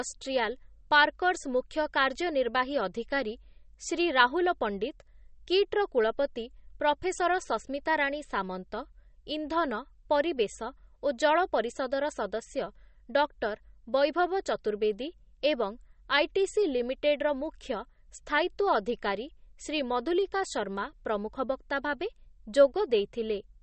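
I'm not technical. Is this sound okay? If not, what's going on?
No. MP3 compression, the likely culprit, runs throughout: the speech sounds watery and dull, with nothing above 8.4 kHz, as detail is discarded to save space.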